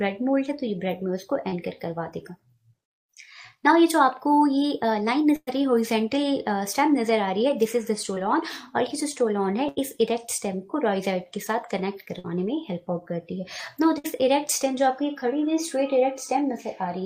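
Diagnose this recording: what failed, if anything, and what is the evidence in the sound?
The network dropped audio twice in short concealed packet loss, at 1.49 to 1.54 s and 8.15 to 8.18 s, with about 20 ms missing each time. The decoder stretched the preceding sound across the hole, causing a brief smear. On a spectrogram the fine detail blurs momentarily.

Bursts of packet loss, also at the network stage, occur at 5.36 to 5.49 s, 9.68 to 9.79 s, 12.19 to 12.26 s and 13.98 to 14.06 s, each losing 60 to 120 ms. Concealment repeats the last sound as it fades, heard as a held buzz or hiss. At 5.36 s it fades into about 50 ms of silence. Waveforms show tapering envelopes, then a jump.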